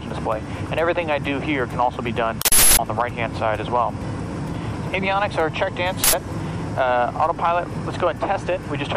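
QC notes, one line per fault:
2.42–2.79 s and 6.04–6.13 s, uninitialised buffer: two sudden, loud bursts of harsh digital noise, lasting about 0.37 s and 0.09 s. Each replaces the audio outright, starting and stopping with hard edges. Leftover memory was played as samples before real audio reached the buffer. The lengths fit 16384- and 4096-sample blocks. Unlike a dropout, the gap is filled with loud junk rather than silence. Unlike clipping, the audio is replaced rather than flattened.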